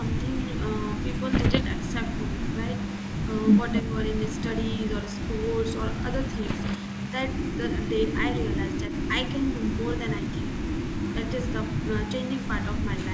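From 0.04 to 3.82 s a faint copy of the speech trails the original by about 255 ms, roughly 10 dB down. This is echo leak, likely from a far-end loudspeaker whose echo canceller let part of the microphone pickup return. The fixed quarter-second lag marks it as a returned copy rather than room reverberation, which would smear continuously instead of repeating the speech as a distinct delayed copy.

Inside that stretch, from 1.31 to 1.64 s, come pops and rough, grainy bursts with brief jumps in level. These are bit errors on an ADPCM link, here the wideband ADPCM coding of the call, at around one percent. Each flipped bit corrupts the decoder's step size and prediction, so the damage rings on for several milliseconds. That lingering roughness distinguishes it from a clean single click.

At 3.82 to 3.97 s the speech dips by about 5 dB for roughly 150 ms. This is speech suppressed in double talk: with both directions active, the canceller likely could not tell the talker from the echo and attenuated both. 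The level pumps down briefly.

Echo leak returns from 4.12 to 7.12 s at the same 255 ms lag and about 10 dB down. A second burst of ADPCM bit errors falls at 6.41 to 6.76 s, with the same pops and rough level jumps. The echo then recurs at 7.28 to 7.57 s, about 10 dB down. It is stronger at 7.76 to 8.19 s and 8.38 to 9.11 s, only about 5 dB below the speech. It is back to about 10 dB down from 9.45 to 12.81 s.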